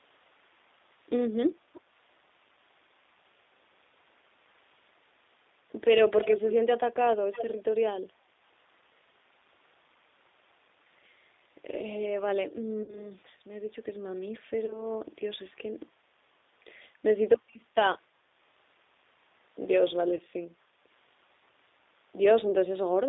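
Speech carried over a G.729 codec for the full clip, at 8 kbit/s and confined to a telephone band of roughly 300 Hz to 3.7 kHz. The codec damage is plainly audible. The voice is rebuilt from a vocal-tract filter, a pitch predictor and a few pulses per frame, so it has a rough, slightly synthetic edge with no air or sibilant detail above the line band. Low-frequency body is also thinned by the narrow band, separate from the normal high-pass of the call's microphone processing. From 7.31 to 7.52 s there is a brief echo leak: a delayed copy of the voice, about 0.3 s behind the original and roughly 10 dB lower, briefly returns. The likely cause is a loudspeaker on one side of the call whose echo canceller let some pickup through. VoIP packet loss concealed by the speech codec appears three times. At 12.83 to 13.11 s about 50 ms of audio is missing, at 14.66 to 14.83 s about 20 ms, and at 20.15 to 20.21 s about 40 ms. 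In each gap the decoder extends the last pitch and filter state with falling gain, so the sound smears into a buzzy tone or a coloured noise that fades. The voice stays weakened or distorted for a short while after packets resume, which is why the disturbed spans run longer than the lost audio itself.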